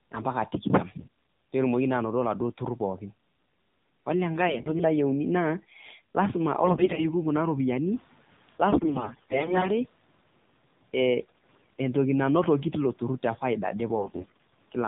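The whole clip runs through the AMR narrowband mobile codec, so nothing above 4 kHz survives and the speech has that buzzy, synthetic edge. The damage is plainly audible, which fits a low AMR-NB mode around 7.4 kbps.

AMR bit errors hit at 0.98–1.08 s, 4.48–4.85 s, 6.62–7.07 s, 8.70–9.71 s, 11.20–11.77 s (just before "entoki nanotoki teiko") and 13.96–14.52 s. Flipped bits in the weakly protected parts of each frame scramble the excitation pulses and fine parameters. The pitch and level roughly hold but the sound turns hoarse and gargly.

Around 8 s the room noise jumps by about 10 dB, still sitting about 26 dB under the speech. From 7.87 to 8.14 s you hear the noise suppressor catching up. The noise comes through with less reduction at first, then sinks by about 9 dB over roughly 270 ms as the estimate adapts.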